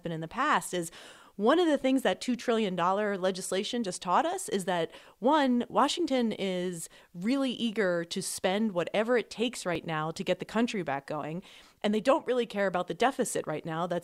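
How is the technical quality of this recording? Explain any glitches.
There is one glitch in the speech. At 9.75 s, between "spend whatever it takes" and "now to get the", an overlap between stream segments trims about 10 ms, leaving a tiny skip and a visible waveform discontinuity.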